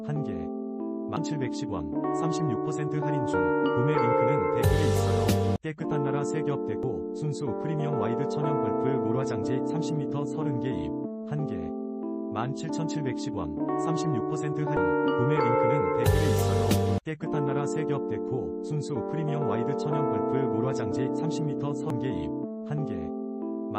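Damaged data in a compressed stream strikes four times: at 1.17, 6.83, 14.77 and 21.90 s. Each time the decoder misreads corrupted frames and loses sync. A brief blip results.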